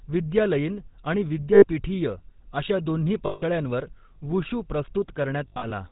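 Throughout, the speech carries a buzzy, gravelly roughness with nothing above 4 kHz. This is the plainly audible signature of the GSM full-rate codec, consistent with its 13 kbps mode. At 1.54 s, 3.26 s and 5.48 s the sound freezes into a rough, metallic ring. These are lost GSM frames, each gap patched by repeating the last good frame. The first gap lasts about 80 ms and the second about 160 ms. The third breaks into short runs scattered over about 240 ms.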